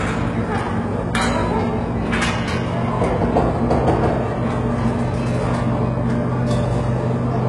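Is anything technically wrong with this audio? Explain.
Yes. Throughout the clip the treble sounds bright but synthetic: gritty, metallic upper bands whose detail does not follow the lower spectrum, cut off entirely above 11.4 kHz. This is likely HE-AAC compression, where spectral band replication copies lower bands upward. Unlike plain low-pass dullness, the top end is present but false, and the heavy damage fits a very low bitrate of around 12 kbps.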